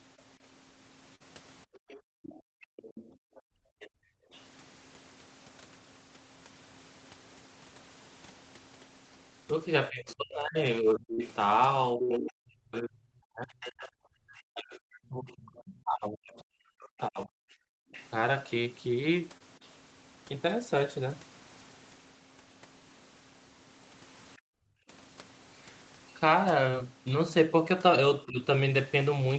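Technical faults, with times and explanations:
0.17–4.40 s and 10.10–19.68 s, other side's voice leaking through: a second voice sits under the main one, faint at about 25 dB down early on and much more present at about 10 dB down later. The likely cause is the echo canceller leaving part of the loudspeaker signal in the microphone. On a spectrogram, a second, weaker set of harmonics overlaps the main speech.
1.15–1.22 s, burst of packet loss: about 47 ms of the last sound is stretched and faded to fill the gap, and then the audio jumps ahead past 40 ms that never arrive. The waveform shows a decaying, repetitive stretch followed by an abrupt restart. On a spectrogram, smeared harmonics end at a sudden edge.
1.70–4.32 s and 24.38–24.88 s, background gated by the echo canceller: the room sound drops away by up to about 40 dB, for roughly one and a half seconds in the first span and half a second in the second. 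The canceller is clamping the microphone while the loudspeaker plays. The noise floor shows as dark, empty patches on a spectrogram.
9.90–17.64 s and 28.28–28.39 s, speech suppressed in double talk: the main talker dips and breaks up while the other side is speaking, by roughly 40 dB across about five seconds in total, and briefly by about 15 dB near the end. The likely cause is the canceller ducking both voices together. The waveform shows chopped, sunken sections.
11.14, 19.38 and 26.71 s, short concealed packet loss: 40, 20 and 20 ms were missing and were patched with 35, 27 and 16 ms of synthesised continuation. Each sounds like a brief smear or wobble. A spectrogram shows short blurred columns where the harmonics go flat before the real signal blends back in.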